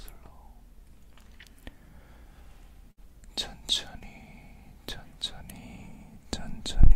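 A burst of packet loss drops about 60 ms of audio at 2.91 to 2.99 s; the receiver stretches the last sound into a fading buzz or hiss before playback skips ahead. A short concealed packet loss at 3.99 to 4.02 s removes about 20 ms, briefly patched with extrapolated sound and heard as a quick smear or wobble.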